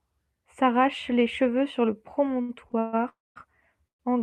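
From 2.41 to 2.95 s, just after "les cheveux sur le", the speech hits repeated stalls (stutter). Packets arrived late and the jitter buffer ran dry four times. Each time, the receiver stretched the last sound to cover the wait, about 235 ms in all, with the longest hold 138 ms. Nearly half of that stretch is concealment, yet nothing is lost, so the speech drags and hiccups. On a spectrogram, the harmonics flatten into short frozen bands between normal segments.

Two call audio freezes follow, at 3.09 to 3.38 s and 3.88 to 4.01 s. The likely cause is packets held up in transit, which emptied the jitter buffer. The last sound lingers briefly, then gives way to silence: about 200 ms in the first freeze and about 110 ms in the second. Speech then resumes where it stopped, after a delay of 269 ms and 117 ms. The waveform shows a short smeared tail and then a flat gap.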